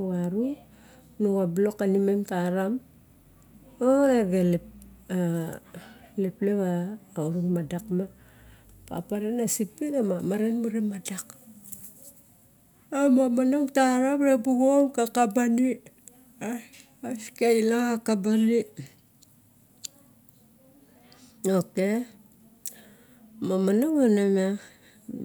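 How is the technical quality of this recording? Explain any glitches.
No technical glitches can be heard in this speech recording. There is nothing here that calls for an explanation.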